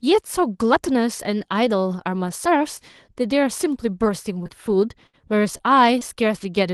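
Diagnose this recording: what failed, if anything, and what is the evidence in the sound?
The network dropped or delayed single packets, and the call receiver's concealment patched each gap: short concealed packet loss. Roughly 20 ms of real audio is missing at each point, replaced by extrapolated sound that then crossfades back. It is heard as brief smears or wobbles at 4.43 to 4.47 s and again straight after, 4.47 to 4.51 s, then at 5.57 to 5.61 s and 5.99 to 6.03 s. A short consonant inside any of these can simply vanish.

At 5.07 to 5.15 s a burst of packet loss occurs, with consecutive packets lost or arriving too late to play at the network and jitter-buffer stage. About 60 ms of speech is gone. The receiver stretches the last sound into roughly 64 ms of synthetic fill, fading it as the gap lengthens, so a held buzz or fading hiss is heard. Speech then resumes further along, with the intervening part missing, while the audio band still tops out near 12 kHz, consistent with an Opus call link.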